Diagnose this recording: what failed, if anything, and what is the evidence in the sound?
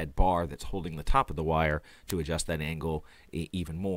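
A digital link's receiver was running on its own clock, not locked to the sender's, and the two drift apart by something like 50 ppm. The result is word clock ticks: about ten sharp clicks, roughly every 0.4 s from 0.14 s to 3.67 s, each where a sample slips.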